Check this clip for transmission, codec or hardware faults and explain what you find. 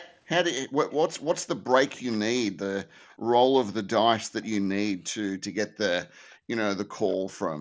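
Two kinds of fault are present in this speech clip: an echo leak in five places and background gated by the echo canceller in two. The band stops at 8 kHz, as expected from the mSBC headset path.

Echo leak appears at 0.0–0.19, 0.9–2.17, 3.08–3.16, 6.3–6.38 and 7.08–7.37 s. A far-end voice returns about 230 ms late and about 20 to 35 dB below the main speech. The likely cause is a loudspeaker-side echo canceller letting part of the played voice back into its microphone. On a spectrogram it looks like faint, time-shifted copies of harmonic bands.

Background gated by the echo canceller occurs at 3.16–3.27 s, with a dip of about 25 dB, and at 6.09–6.4 s, with a dip of about 39 dB. The canceller clamped the microphone while its loudspeaker played. The room sound drops out and then returns, showing as a sudden dark vertical gap in the noise floor and a flattened waveform.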